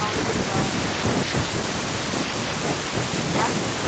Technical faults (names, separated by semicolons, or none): none